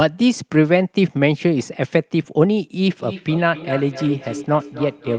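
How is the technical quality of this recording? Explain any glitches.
The recording has a clear fault in its second half. From 2.86 s to the end there is feedback echo between two devices: a second device on the same call replays this microphone's audio, which is picked up again beyond any echo canceller's reach, so the speech returns roughly every third of a second, thin and ringing, peaking about 14 dB below the speech. The band limit near 12 kHz comes from the call codec.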